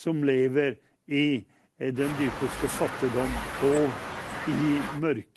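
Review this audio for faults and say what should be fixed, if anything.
Nothing to fix: the speech carries only the ordinary coding texture of a call path, with the top end rolled off around 12 kHz, and no faults are present.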